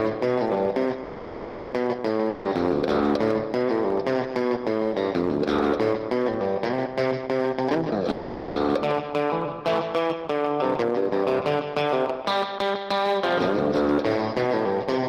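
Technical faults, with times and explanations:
Throughout, hard clipping: the signal overdrives a stage by about 6 dB, so a few percent of samples exceed its limit and are cut flat. Those squared-off peaks add high harmonics, heard as harsh crackle and fuzz on loud moments.
1.03–1.74 s and 8.11–8.58 s, call audio freeze: packets likely stalled and the jitter buffer ran dry, so the last sound is stretched into a fading buzz for 690 ms and 450 ms. Nothing is lost; playback resumes where it stopped, later by that amount.
2.29–2.47 s, long network dropout: audio likely failed to arrive, and the receiver filled the 160 ms gap by extending the last sound into a decaying buzz. When sound returns, that 160 ms of material is gone.
7.47–7.68 s, jitter buffer speed-up: the buffer held too much audio, so the receiver trimmed out short pitch-period slices, about a tenth of a second in total. The sound briefly runs at 138% speed with unchanged pitch, giving a hurried feel.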